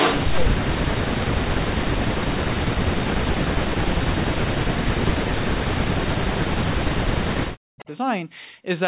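Echo leak from 0 to 0.4 s: a copy of the sound returns 240 ms late, even louder than the direct signal. It is likely a loudspeaker pickup the far end's echo canceller failed to remove, so a smeared, doubled layer sits over the opening.

Speech suppressed in double talk follows at 0.4 to 0.59 s, 0.8 to 1.34 s, 1.63 to 2.55 s and 2.92 to 7.88 s. The speech dips by as much as 40 dB or so, sometimes nearly vanishing. It is likely an echo canceller that couldn't separate this talker from the echo and turned both down.

A second, brief echo leak at 7.79 to 7.85 s repeats the same 240 ms delay, this time faint, far below the speech. It is a small scrap of returned sound inside the last suppressed stretch.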